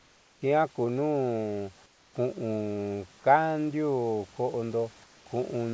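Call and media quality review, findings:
Pauses at 0.00–0.42 s, 1.86–2.14 s and 5.04–5.26 s: room background turns flat, featureless and about 3–4 dB quieter. Comfort noise in place of the background, likely from discontinuous transmission substituting synthetic noise during silence.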